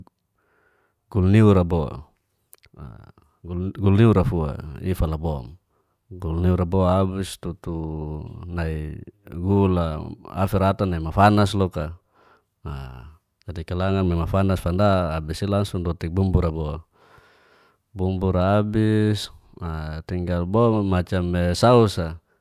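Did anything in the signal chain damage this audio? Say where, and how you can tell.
No, nothing in the signal chain damaged this speech recording. No stage along the path, from capture to playback, leaves anything audible on the sound.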